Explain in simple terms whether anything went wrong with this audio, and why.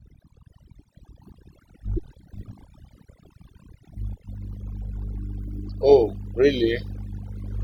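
From start to finish the pauses between phrases drop away and break up into twinkling specks. This is overdone noise removal. A cleanup tool was pushed too hard on a noisy recording, shutting off any slice of the sound that resembled its idea of background noise. The softer parts of the voice looked similar, so they were stripped away too.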